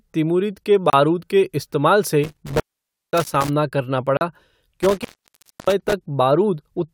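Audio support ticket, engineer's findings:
Block of digital silence, 0.90–0.93 s (30 ms, between "तिमुरिद के" and "के इस्तेमाल"), 3.24 s (10 ms) and 4.17–4.21 s (40 ms). Hard cuts to silence with no fade. Probably the playback or capture buffer not filled in time.

Intermittent contact, 2.24–3.49 s (after "के इस्तेमाल") and 4.79–5.93 s. Line drops out for about 0.53 s and 0.63 s with crackle at the edges and faint hiss underneath. Points to a loose cable or plug opening momentarily. Worth reseating connectors first.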